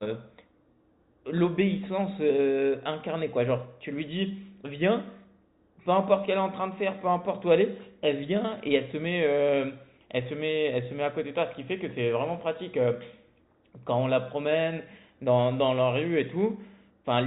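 Nothing in this speech recording stood out as a technical problem on listening.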